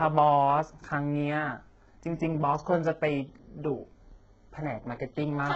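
Heavy HE-AAC compression throughout, likely near 8 kbps, rebuilds treble from copied lower bands, so the s sounds turn gritty and metallic, empty above 7.9 kHz.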